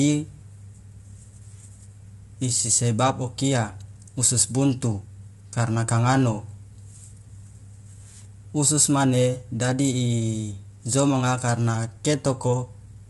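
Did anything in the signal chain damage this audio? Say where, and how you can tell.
Yes, at the codec stage, throughout the speech. The voice sounds rough and grainy, with noise filling the gaps between harmonics, and nothing is present above 11.6 kHz. This is likely low-delay AAC compression (AAC-ELD), whose short frames blur harmonics at a bitrate around 32 kbps.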